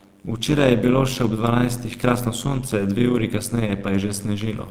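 Across the whole speech clip runs an overlap-add ripple: frames were resynthesised with overlapping windows that don't sum evenly, so level swings by about 11 dB around a hundred times a second. It sounds like a metallic buzz with extra tones around the voice, and the waveform envelope shows fine regular scalloping.

At 1.23 to 1.25 s and again at 2.45 to 2.47 s, each 20 ms stretch is a lost packet rebuilt from error correction. The decoder played a low-bitrate redundant copy, which fits a single lost packet each time, so there's no gap, just a brief rough, grainy patch. A spectrogram would show a short noisier slice there.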